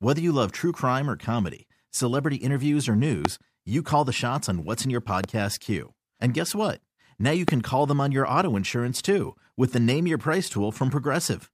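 A sharp, single loud pop cuts through the speech three times: at 3.25 to 3.27 s, between "comedy celebrity interviews or" and "you call the shots", roughly 20 dB above the speech; at 5.24 to 5.26 s, just after "on what's in your", about 15 dB up; and at 7.48 to 7.51 s, just before "call them on your", again about 20 dB up. The speech carries on underneath each one. The likely cause is a brief voltage spike, from a plug, switch, static or driver glitch, entering the signal chain.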